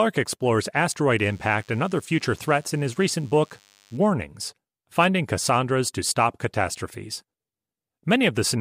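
From 1.19 to 3.98 s a DECT cordless phone buzz sits under the speech: a thin, steady 100 Hz drone with plenty of harmonics, quite far below the voice. A nearby DECT handset or base is bursting every 10 ms, and the audio circuitry rectifies those bursts into sound.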